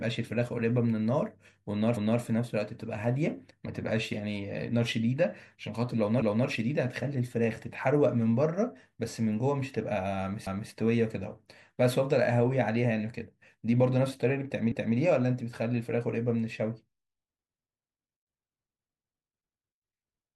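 Speech processed in 4-second chunks with overlapping chunks: each new chunk begins 250 ms before the previous one ended, so every join replays the last quarter-second of audio. The result is a regular stutter at 6.22 s, 10.47 s and 14.72 s, where a fragment of speech is heard twice. The even spacing of the stutters gives away the fixed chunk boundary.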